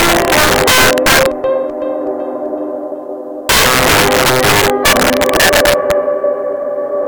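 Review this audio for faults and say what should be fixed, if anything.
A gain stage driven about 10 dB too hot exceeds the integer limit and wraps to the opposite sign throughout, so roughly one sample in twenty flips across full range as violent cracks on loud moments. Fix it by reducing gain before that stage and using saturating arithmetic so peaks clamp instead of wrapping.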